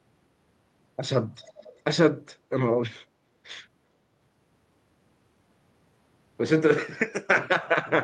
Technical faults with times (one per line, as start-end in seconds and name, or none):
1.44-1.81 echo leak